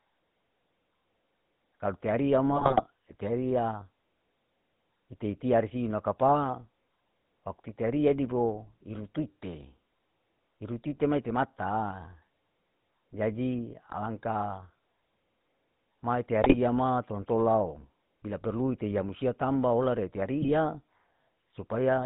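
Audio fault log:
throughout, GSM full-rate codec: the speech has a buzzy, gravelly roughness, and the top end stops short at 4 kHz, giving a dull, boxed-in sound. The rasp fits the 13 kbps full-rate GSM codec. It models the vocal tract as a filter and drives it with a sparse, regularly spaced pulse train that keeps only every third excitation sample, so the fine texture of the voice is replaced by a coarse, grainy buzz.
2.54–2.82 s, 16.44–16.57 s, 20.42–20.49 s, GSM bit errors: the voice breaks into squawks, pops and gargling, first right after "kalau te ariya", then just before "tolan tolao bila perlu", and last after "musia tamba hola re". The lengths fit bursts of corrupted 20 ms frames, longest in the first event. Flipped bits in the filter, pitch and gain parameters warp the spectrum and spike the level frame by frame.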